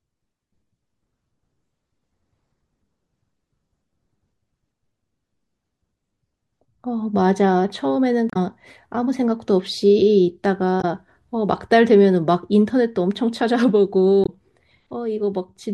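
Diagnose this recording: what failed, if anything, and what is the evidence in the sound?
The failure is at the codec stage: damaged data in a compressed stream. Three short disturbances of about 70 ms each break into the speech, at 8.30 to 8.37 s, 10.78 to 10.85 s and 14.23 to 14.30 s, heard as a chirp, squawk, click or short hole. Corrupted bytes make the decoder misread the affected frames and lose sync until it finds the next valid header. On a spectrogram each appears as a narrow vertical disturbance, and the waveform shows a matching discontinuity.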